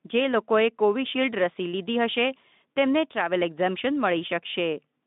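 Speech carried over a narrowband line of about 150 Hz to 3.6 kHz, with no technical faults to report.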